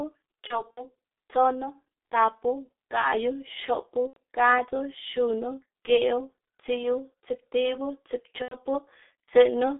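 Throughout, the speech sounds muffled and hoarse, squeezed into roughly 250 Hz to 3.7 kHz with smeared consonants: heavy G.723.1 codec damage at 6.3 kbit/s.

At 0.47–0.85 s, just before "tsonu tapu gaꞌyu xopu", at 4.07–4.19 s, just before "gadzu xunu", and at 8.42–8.57 s, the sound stretches into a fading buzz or coloured noise. This is VoIP packet loss concealed by the speech codec, with 90 ms lost each time, which fits three 30 ms frames.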